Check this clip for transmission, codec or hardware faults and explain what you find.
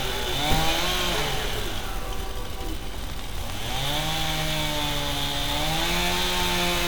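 One fault turns up: a train of clicks running from 3.04 s to 6.83 s. Something is likely injecting repeated impulses into the signal path, such as interference from nearby equipment or a faulty connection or power supply. The pulses arrive at about 6.35 per second but at uneven spacing, some thirty of them, each standing roughly 10 dB above the surrounding sound. They are heard as an irregular ticking laid over the audio through the second half.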